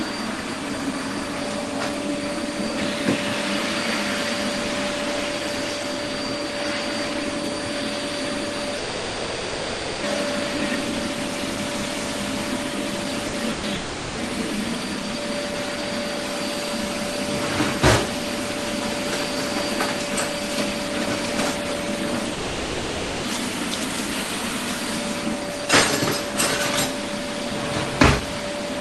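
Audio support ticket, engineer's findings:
Long network dropout at 8.77–10.06 s, 13.75–14.20 s and 22.33–23.26 s. Audio stops arriving, the last sound gets stretched into a fading buzz or hiss until playback jumps ahead. Gaps of roughly 1.3, 0.4 and 0.9 s, likely a network stall upstream.

Burst of packet loss at 13.27 s (60 ms) and 13.51–13.66 s (120 ms), right before the second dropout. Jitter buffer conceals the hole by holding and fading the last sound, then resumes with that chunk gone. Points to a shaky link around 13–14 s.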